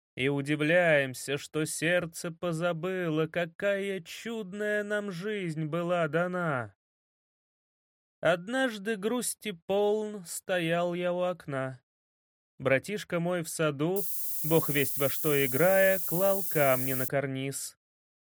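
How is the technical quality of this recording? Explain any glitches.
The recording has one clear fault: low bit depth with noise shaping from 13.96 s to 17.08 s. Across that span the audio is quantised to only 5 bits, and the rounding error is fed back so its energy is pushed toward high frequencies. The result is a steady, thin hiss climbing sharply toward the top of the band, roughly as loud as the sound itself, so it sits right alongside the program material until it stops at 17.08 s.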